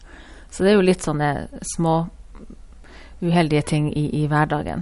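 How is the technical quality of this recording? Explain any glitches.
The recording sounds dull and watery throughout, with nothing above 11.2 kHz and plainly audible swirling on sibilants and consonant attacks. This is likely MP3 compression starved of bits, consistent with roughly 48 kbps: the encoder cut the treble and let weak frequency lines flicker between frames.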